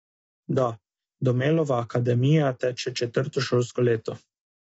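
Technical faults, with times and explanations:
Throughout, low-delay AAC compression: the speech sounds rough and grainy, with a hiss filling the gaps between the pitch harmonics and nothing at all above 7.8 kHz, so the top end is dull. That points to AAC-ELD, the short-frame codec used in video calls, likely running at something like 24 kbps. Its short frames can't resolve the harmonics cleanly at that rate, so the damage is plainly audible.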